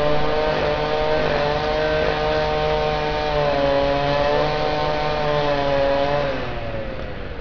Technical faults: aliasing

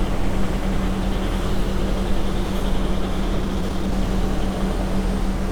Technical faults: jitter buffer speed-up

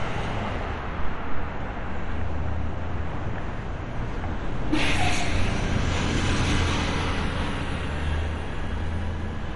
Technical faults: MP2 compression

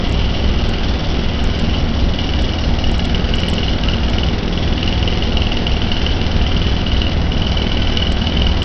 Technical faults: Bluetooth SBC compression

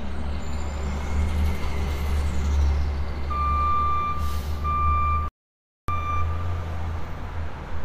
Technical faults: playback stall

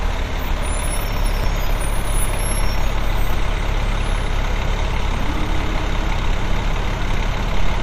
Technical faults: MP2 compression; audio missing between chunks

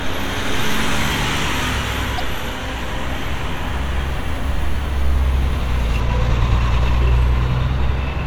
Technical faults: broken MP3 bit reservoir; de-emphasis applied wrongly

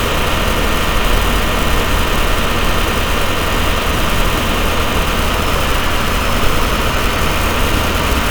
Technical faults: none

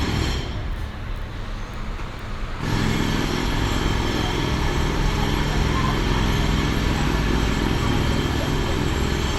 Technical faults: none

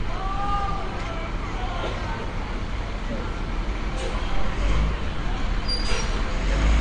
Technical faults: AAC compression

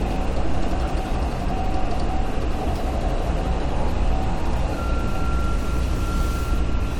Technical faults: none

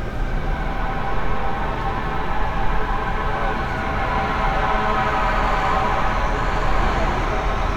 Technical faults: none

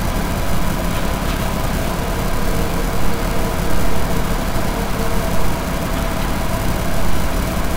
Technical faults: none

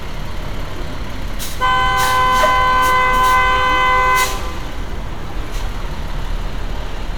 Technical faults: none

